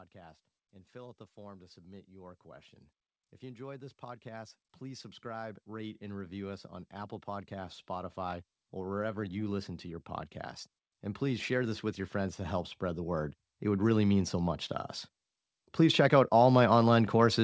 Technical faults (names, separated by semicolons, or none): automatic gain rising